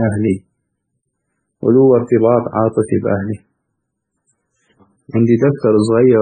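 Transcoding between lossy codecs is heard throughout the speech. Nothing survives above 9 kHz, and several kinds of smearing and warbling artefacts sound together. The likely cause is a very low-bitrate MP3 re-encoded through WMA and then AAC-LC, each pass compounding earlier damage.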